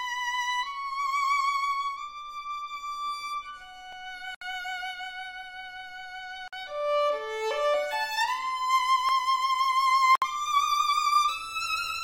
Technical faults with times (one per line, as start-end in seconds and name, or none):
3.93-3.97 overlapping chunks
4.35-4.41 gap at a join of encoded pieces
6.48-6.53 gap at a join of encoded pieces
9.09-9.14 overlapping chunks
10.15-10.22 gap at a join of encoded pieces